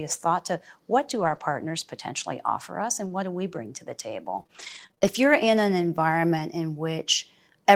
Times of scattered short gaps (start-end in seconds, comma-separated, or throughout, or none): 1.19-6.41